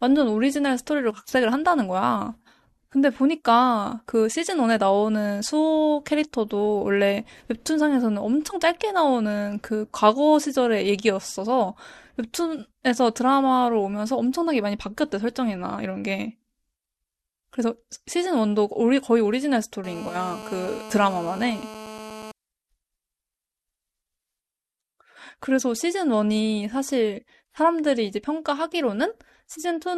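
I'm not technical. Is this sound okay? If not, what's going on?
No. From 19.84 to 22.32 s a harsh, raspy buzz sits steadily under the speech. This is GSM phone buzz: an older mobile phone nearby, likely on a call, sends radio pulses 217 times a second, and the recording equipment picks them up as sound.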